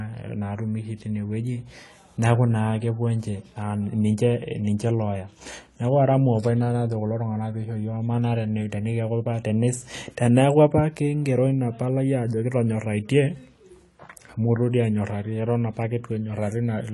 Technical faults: AAC compression

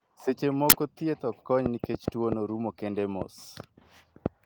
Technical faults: uninitialised buffer; train of clicks

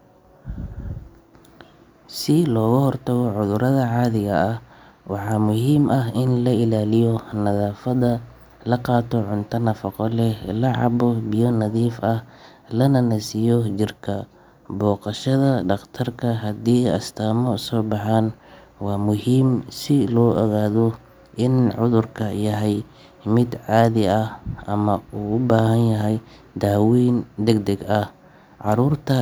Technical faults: none

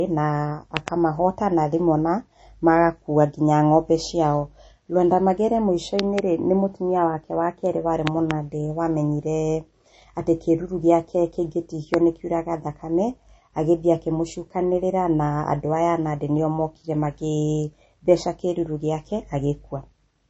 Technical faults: MP3 compression; loud pop

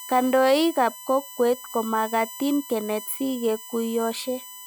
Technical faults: USB whine

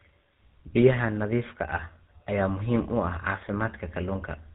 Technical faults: tandem speech coding

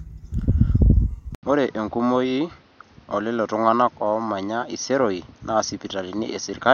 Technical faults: input switched to a poorer device

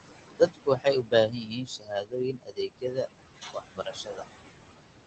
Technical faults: noise suppressor artifacts; speech cut by the noise suppressor

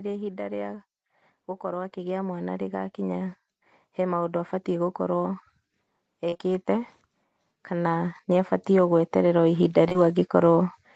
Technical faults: automatic gain rising; short concealed packet loss

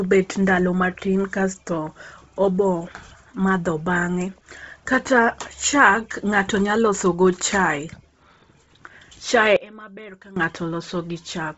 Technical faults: Bluetooth LC3 compression; one channel inverted

